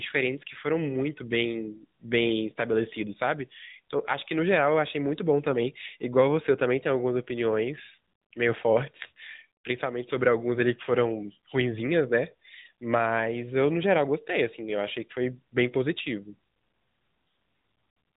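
From start to finish the speech carries AMR narrowband mobile codec damage. Nothing passes above about 3.8 kHz, so the sound is thin and telephone-like, and the vocal-tract model leaves a plainly audible buzzy, synthetic edge, which fits a mid-rate mode around 10.2 kbps.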